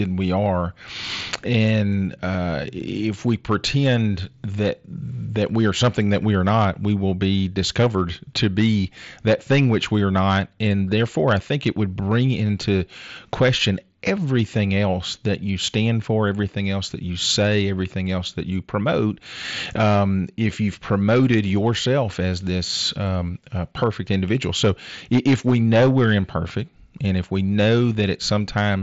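Hard clipping runs through the whole speech clip: the signal is overdriven by about 10 dB, so roughly one percent of samples hit the ceiling and flatten, giving a harsh crackle on loud syllables. The band stops near 7.7 kHz, consistent with the mSBC Bluetooth headset path.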